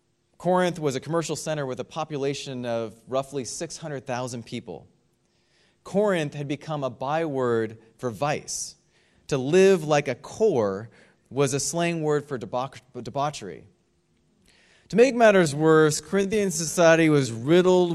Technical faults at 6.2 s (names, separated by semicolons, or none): none